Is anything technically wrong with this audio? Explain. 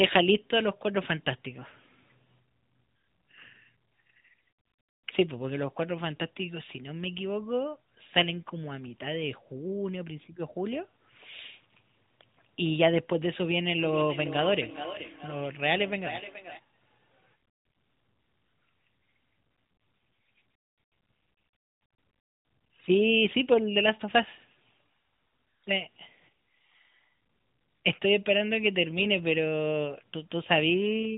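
Yes. From 13.73 to 16.62 s there is feedback echo between two devices. Two endpoints on the same call are picking each other up: one device plays the far audio, the other device's microphone captures it and sends it back. Each echo canceller only subtracts its own playback, so this loop goes uncancelled. The speech returns roughly every 0.4 s, peaking about 12 dB below the direct voice, sounding hollow and ringing, within the 4 kHz ceiling of the AMR narrowband phone path.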